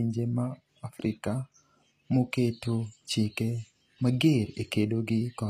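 Throughout, s sounds turn gritty and lispy, likely from HE-AAC compression. A spectrogram shows treble copied upward from lower bands, ending sharply at 14.9 kHz.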